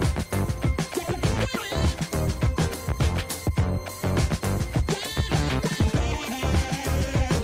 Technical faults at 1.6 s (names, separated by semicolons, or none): skip ahead